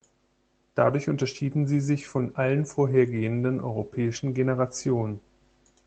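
At 0.89–0.91 s, 3.15–3.21 s and 4.05–4.07 s, lost packets (one, two and one) were rebuilt from error correction: the decoder played the lower-quality copy carried in the next Opus packet, so there's no gap, just brief rougher, noisier patches of about 20, 40 and 20 ms.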